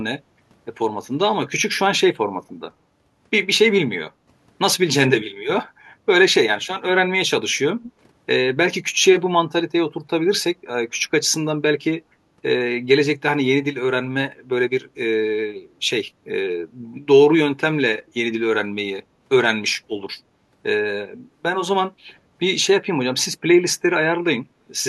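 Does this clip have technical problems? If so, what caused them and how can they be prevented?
Yes. Between 5.7 and 5.8 s the room sound briefly sinks by about 9 dB, for roughly 70 ms, then comes back. This is background gated by the echo canceller, which clamped the microphone down while the far-end loudspeaker was playing. A headset or gentler echo suppression would prevent it.

From 7.83 to 7.92 s a faint, delayed copy of the speech trails behind it, arriving 94 ms late at around 20 dB below the speech. The likely cause is an echo leak: loudspeaker sound reached a microphone and slipped past that side's echo canceller. Headphones on that side would prevent it.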